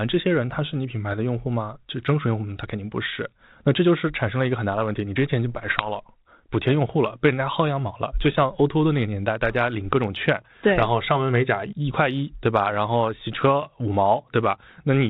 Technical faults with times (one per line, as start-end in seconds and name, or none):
5.58-6.04 bit errors on an ADPCM link